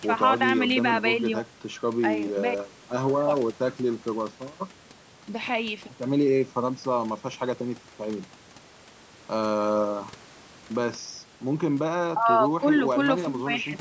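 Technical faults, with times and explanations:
No technical faults; the room noise sits about 22 dB below the speech, and the call microphone processing leaves nothing above 8 kHz, as expected for that path.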